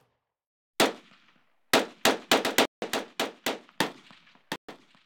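From 2.44 s to the end, a doubled audio track appears: a second full-band copy of the sound enters abruptly, trailing the original by roughly 0.7 s and sitting about 10 dB lower, with no decay or room colour. Its likely cause is a slower second capture path or an edit holding two misaligned copies.

At 2.65 to 2.82 s (167 ms) and 4.56 to 4.69 s (127 ms), a Bluetooth stall cuts the audio to silence before it resumes. The likely cause is interference delaying packets until the headphone buffer ran empty and playback waited for resent data.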